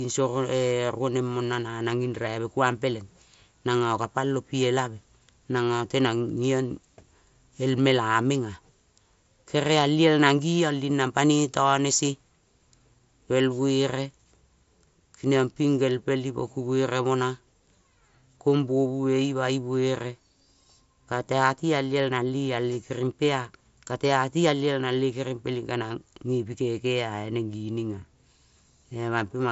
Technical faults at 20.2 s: none

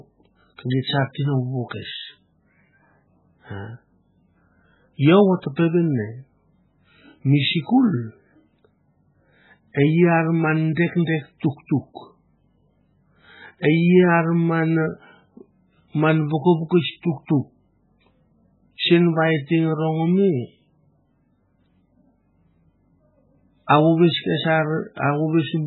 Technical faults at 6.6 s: MP3 compression

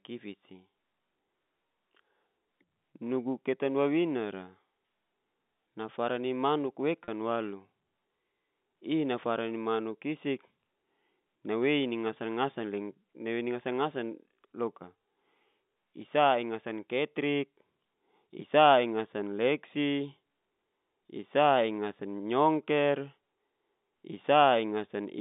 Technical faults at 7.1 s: packet loss with pitch repetition

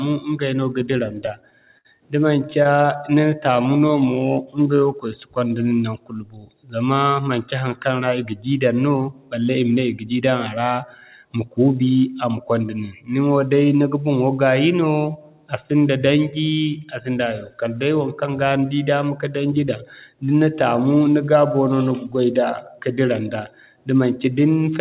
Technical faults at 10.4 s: jitter buffer speed-up

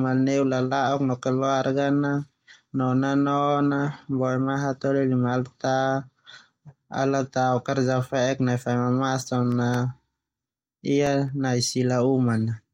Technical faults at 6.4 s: none

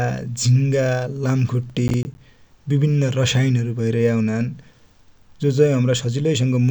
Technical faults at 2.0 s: processor overload crackle

